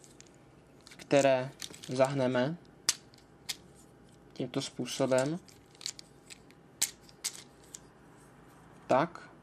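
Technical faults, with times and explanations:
Nothing stood out as a technical fault on listening.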